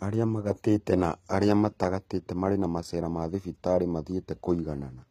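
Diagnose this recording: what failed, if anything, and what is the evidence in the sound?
The codec stage is the culprit here, likely HE-AAC compression, and it's plainly audible the whole way through. The s sounds come out gritty and metallic because the treble is rebuilt from copied lower bands, nothing sits above 14.9 kHz, and the damage fits a bitrate around 20 kbps.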